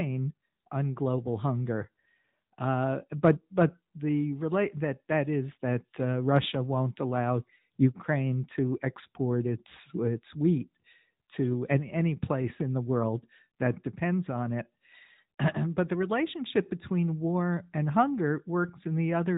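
From start to finish the speech carries AMR narrowband mobile codec damage. Everything above 4 kHz is gone, giving that boxed-in phone-line sound. The coding is plainly audible, buzzy and a bit synthetic, which fits the 10.2 kbps AMR-NB mode, where each 20 ms frame is rebuilt from a vocal-tract model.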